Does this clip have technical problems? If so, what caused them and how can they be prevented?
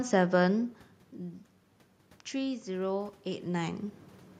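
Yes. From 2.31 to 3.87 s there is automatic gain rising: after the input level fell by about 11 dB, the automatic gain control judged the signal too quiet and raised its gain by about 4 dB over roughly a second and a half. Unlike the talker moving, which happens around 3 s and changes only the voice, this swell lifts the room noise along with the speech. Fixing the input gain manually, or slowing the AGC, prevents it.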